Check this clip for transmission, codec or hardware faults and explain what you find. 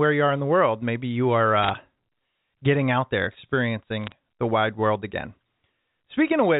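Two kinds of fault turn up, carried over a G.711 A-law telephone link whose coding leaves at most faint damage.

Bit errors on a digital phone line strike twice, from 1.62 to 1.70 s and from 4.04 to 4.12 s. Flipped bits in the 8-bit logarithmic samples, at roughly half a percent in the first burst and a third of a percent in the second, corrupt single samples across a handful of frames. Where a sign or high-order bit is hit, the sample jumps, so each burst sounds like brief sharp ticks and crackle over intact speech.

Loudspeaker feedback squeal runs from 2.90 to 4.68 s. A microphone is picking up the loudspeaker it drives, and at 6.1 kHz the loop gain exceeds one, so that tone reinforces itself on every pass. It swells over about one and a half seconds into a piercing whistle that ends up a few decibels louder than the speech. The second burst of bit errors lands while the squeal is still sounding.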